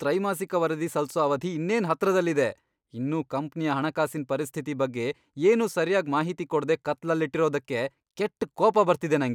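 Listening closely to the speech, nothing stood out as a technical problem at any point.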